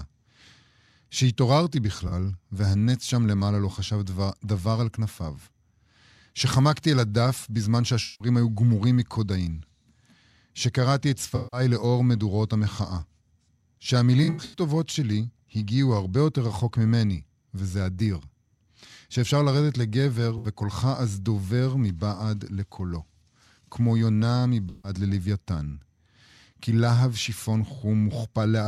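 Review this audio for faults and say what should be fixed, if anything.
AAC frame loss with concealment occurs at 2.08, 8.03, 11.35, 14.23, 20.38 and 24.69 s. Each gap lasts 43 to 213 ms. The decoder rebuilds missing audio from the last good spectrum, so the speech smears into noisy patches. At 14.23 s the losses scatter across 0.3 s. Add forward error correction or retransmission to stop frames being lost.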